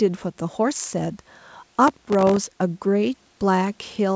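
From 1.88 to 2.37 s, a gritty burst of crackle tears across the speech, then stops abruptly. This is processor overload crackle: the processor repeatedly missed its deadlines, leaving dozens of tiny hard-edged silent gaps, which fits very short buffers of around 1.5 ms.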